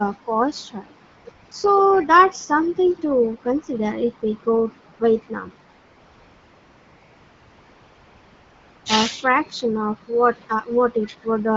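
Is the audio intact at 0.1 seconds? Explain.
Yes, the audio is intact at 0.1 s, with the speech passing through the AMR wideband (HD Voice) codec at 12.65 kbit/s and no fault at that moment.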